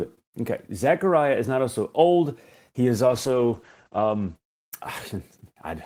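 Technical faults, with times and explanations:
3.07–4.41 s, call bitrate drop: the speech turns muffled and rough, with the top end cut from about 20 kHz down to 8 kHz for 1.26 s. The encoder is being starved of bits, consistent with a fall from roughly 32 to 12 kbps.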